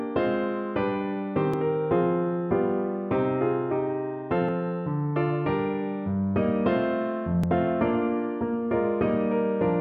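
Three short skips jump the sound forward at 1.54, 4.49 and 7.44 s. Each time, something like 50 ms seems to vanish and the two sides butt straight together with no gap of silence. The regular spacing of roughly 3 s between skips points to audio missing between chunks, most likely a recorder or processor handling the signal in 3-second blocks and dropping a sliver each time it closes one block and opens the next.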